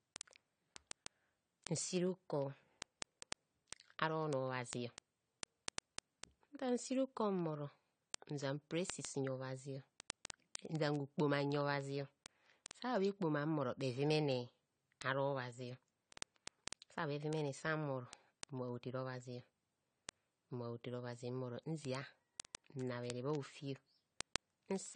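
A speech recording, likely passed through low-bitrate AAC compression at about 32 kbps, loses everything above 9.1 kHz and sounds dull and smeared with plainly audible warbling. A receiver running on its own unlocked clock, off by a few hundred parts per million, drops or repeats single samples, producing word clock ticks roughly twenty times a second from 0.11 s to 24.91 s.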